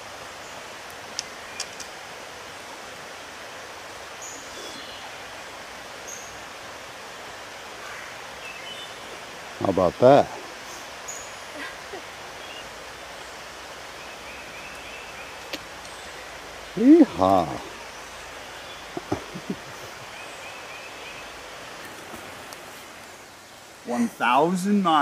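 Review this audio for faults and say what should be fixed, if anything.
Nothing here needs fixing; no faults were heard.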